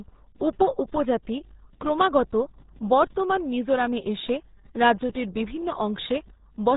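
From start to finish the speech carries RealAudio 14.4 codec damage. Nothing passes above 3.8 kHz, and the heavy coding leaves a muffled, gargly texture, which fits an 8 kbit/s dial-up codec. A plain low-pass filter would dull the sound without that bubbling distortion.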